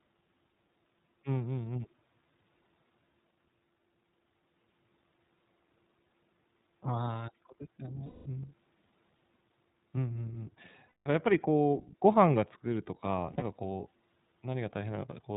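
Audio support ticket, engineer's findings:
iLBC codec throughout: narrowband, rough, slightly synthetic speech; spectrogram shows nothing above 4 kHz. Plainly audible coding damage, consistent with iLBC's 15.2 kbps mode and 20 ms frames.

Lost iLBC frames at 6.08–6.10, 8.06–8.27, 10.89–11.08, 13.26–13.43 s: decoder concealment repeats the last pitch cycle with noise, producing a held buzzy vowel. The spectrogram shows smeared, repeated harmonics at these times. The 13.26 s gap is scattered, with a longest run of roughly 70 ms. Clean recovery right after each gap.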